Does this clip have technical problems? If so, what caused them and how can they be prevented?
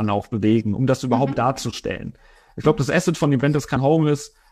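Yes. Compressed frames are skipped at about 3.72 to 3.77 s. The speech jumps forward by roughly 150 ms, which points to about three whole frames of around 46 ms each that were either missing from the file or rejected by the decoder as damaged. To prevent this, verify file integrity after transfer and use error-protected storage or transmission so damaged frames are repaired or resent.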